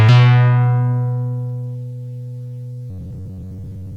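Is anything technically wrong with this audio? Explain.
Yes. From 2.90 s to the end, new audio is likely arriving too seldom, so a roughly 10.7 ms buffer repeats in place of most of the real signal. This robotic sound from repeated short buffers imposes a fixed 93.8 Hz metallic buzz.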